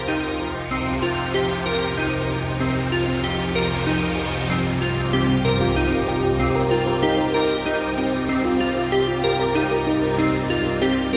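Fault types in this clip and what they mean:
No faults can be heard in this clip. It has passed through a call path, and nothing reaches above 4 kHz, which fits a narrowband telephone codec such as G.711.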